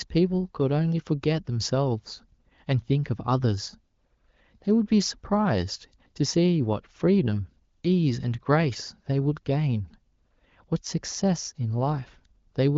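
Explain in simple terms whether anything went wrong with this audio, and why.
Nothing stood out on listening to this speech, which sounds like a normal HD Voice phone call with the slightly limited top end that kind of call always has.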